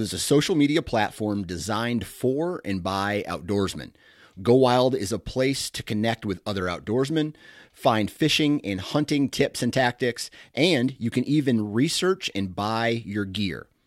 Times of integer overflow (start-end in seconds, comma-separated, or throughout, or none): none